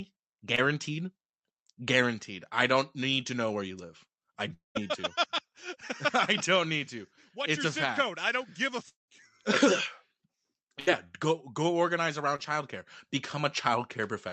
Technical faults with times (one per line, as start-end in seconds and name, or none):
0.55-0.59 short concealed packet loss
4.53-4.77 long network dropout
8.89-9.10 long network dropout
10.80-10.89 burst of packet loss
12.36-12.40 short concealed packet loss